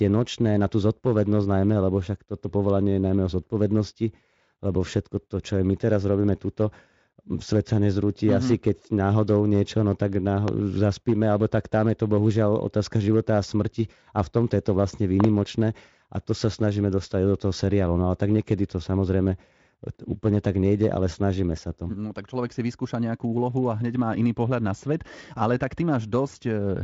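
Speech clip with a loud pop at 10.48 s and a double loud pop at 15.20–15.26 s, likely from electrical switching or static, each showing as a spike well above the speech on the waveform and a thin full-height vertical line on the spectrogram, which ends near 7.6 kHz.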